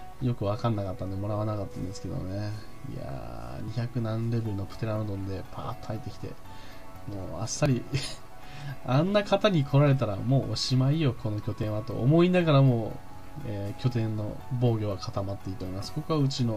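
At 3.68, 7.66, 11.63 and 15.61 s the sound skips forward by a sliver, roughly 20 ms, with no silence filling the gap. The skips land about every 4 s, which points to audio missing between chunks. A short piece is likely lost each time one 4-second block closes and the next opens. On a waveform each seam shows as an abrupt jump in shape, and a spectrogram shows a sharp vertical break.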